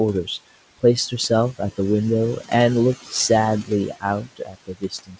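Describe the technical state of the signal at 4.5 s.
At 4.5 s the noise suppressor is misreading the speech itself as noise, so this moment sits inside a stretch of speech cut by the noise suppressor that runs from 4.24 s to the end of the clip at 5.19 s. The suppressor's frame-by-frame gain treats the speech energy as part of the steady background and turns it down with it, by about 21 dB at the deepest point. The result is that the sound here comes across faint and swallowed.

Running under this are noise suppressor artifacts that persist through the whole clip. The suppressor is pulling the room noise down by about 16 dB in the bands it classes as noise, so the noise sinks between words and rises under them. The room noise itself sits 14 dB below the speech. The content stops at 8 kHz, which points to a G.722 call codec.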